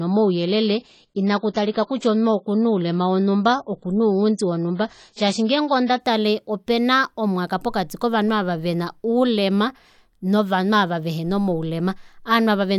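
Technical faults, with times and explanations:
0.0 to 6.0 s, adaptive stream starting at a low bitrate: the speech opens dull and swirly, with nothing above 9.9 kHz and heavier codec artefacts, which fits a low-rate AAC version of around 24 kbit/s chosen for a fast start. At 6.0 s, just before "opena omwaka pokati kovanhu", the player steps up to a richer stream, near 96 kbit/s, with no gap. A spectrogram shows a flat ceiling at 9.9 kHz that lifts abruptly there; the waveform stays continuous.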